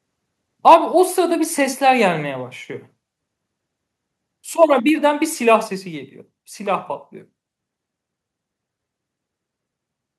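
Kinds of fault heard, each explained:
Microphone overload: the loudest speech at 0.67 to 0.75 s (about 4 dB over, roughly a tenth of samples flattened) and 4.62 to 4.64 s (about 1 dB over) crackles harshly, likely from excessive input gain. Waveform peaks are flat-topped, and the spectrogram shows brief broadband smears.
Microphone volume stepped down: at 0.74 s, 1.74 s and 4.89 s, speech and background drop together by about 2, 1 and 3 dB, likely the call software lowering input gain when the microphone ran too loud or clipped. The waveform envelope steps down abruptly, and the spectrogram darkens across all frequencies.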